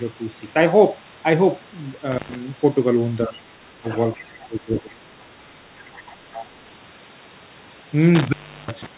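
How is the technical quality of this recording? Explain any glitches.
The recording has three kinds of glitch, clustered in the middle and near the end. The audio is band-limited to about 4 kHz, which fits a narrowband G.711 call path.

Intermittent contact at 2.12–2.35 s and 8.15–8.86 s: a loose plug or cable briefly breaks the circuit. The speech drops out for roughly 0.11 s and then 0.36 s, with crackle at each edge and faint hiss while the line is open.

Speech suppressed in double talk at 3.27–3.43 s, 3.78–3.85 s, 4.16–5.07 s and 5.68–5.75 s: likely the echo canceller ducking the talker while the far side spoke too. The speech dips by about 10 to 20 dB, longest across the stretch near 4.2–5.1 s.

Other side's voice leaking through at 3.33–3.40 s, 3.89–4.00 s, 5.86–6.14 s and 6.33–6.46 s: the far side's voice played on the talker's loudspeaker likely escaped echo cancellation. Scraps of a second voice sit about 15 to 30 dB below the speech, loudest near 6.3–6.5 s.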